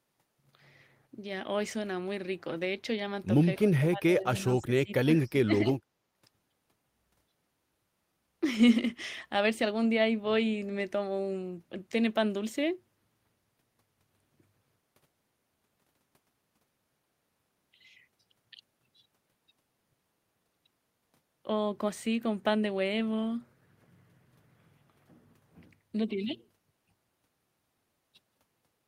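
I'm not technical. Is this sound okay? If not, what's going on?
No, not quite. Between about 3.77 and 5.76 seconds the voice dips sharply and breaks up in places, getting much quieter or dropping out for about a second and a half in total. This is speech suppressed in double talk. The likely cause is that both people spoke at once, and the call's echo-cancelling feature couldn't tell the talker apart from the other side's voice coming back through the speaker, so it turned everything down.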